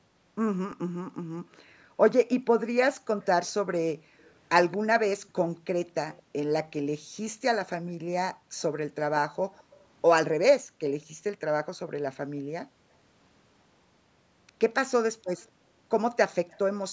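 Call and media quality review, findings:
Faint delayed copy of speech trailing the talker by 222 ms, at 2.23–6.98 s, 8.59–9.85 s and 15.37–16.59 s, roughly 25, 35 and 30 dB below the speech. Echo leak: likely a speakerphone echo canceller letting residual loudspeaker pickup back into the call.

Room background ducking out, then returning, within 7.0–8.58 s, 10.63–12.91 s and 15.51–15.78 s, with drops of about 39, 40 and 34 dB, each totalling half a second or less. Background gated by the echo canceller: microphone suppressed hard during loudspeaker playback.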